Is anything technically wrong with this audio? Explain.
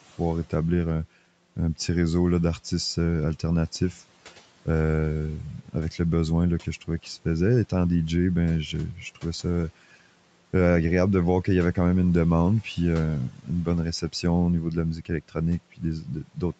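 Yes. Speech cut by the noise suppressor occurs three times, from 13.29 to 13.5 s (after "une demande puis euh", before "bonne réception au niveau"), 14.96 to 15.11 s (after "au niveau de la"), and 16.0 to 16.39 s. The suppressor mistakes quiet speech for background and pulls it down by about 11 to 13 dB along with the room noise, so short stretches of speech sound swallowed and faint.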